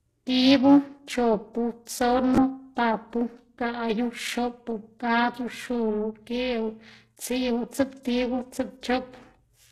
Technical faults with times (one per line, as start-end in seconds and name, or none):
0.00-9.72 HE-AAC compression
0.00-9.72 periodic clock jitter